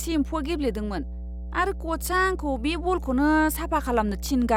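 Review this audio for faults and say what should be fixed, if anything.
Mains hum runs throughout, a steady 60 Hz tone about 10 dB below the speech, from power-line coupling; unlike broadband rumble, it holds one fixed pitch. Prevent it by breaking ground loops and routing cables away from transformers.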